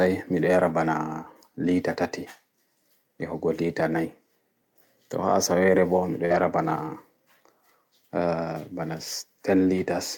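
At 6.25 s there is a burst of packet loss lasting to about 6.32 s. Several packets in a row never arrived in time, so the receiver stretched the last sound it had for about 47 ms, fading it down into a held buzz or hiss, and then skipped ahead. About 40 ms of speech is simply gone. On a spectrogram this shows as smeared, flat horizontal bands that dim before an abrupt cut. In the waveform it looks like a shrinking, repetitive stretch.

Overlapping it, from 6.3 to 6.4 s, comes a lost packet rebuilt from error correction. Further missing packets were recovered from the low-bitrate backup copies carried in the packets that followed them. About 60 ms was rebuilt this way, which fits three 20 ms packets. Nothing drops out, but the sound turns rougher and grainier for that tenth of a second. A spectrogram shows blurrier harmonics and a noisier texture, while the waveform stays continuous.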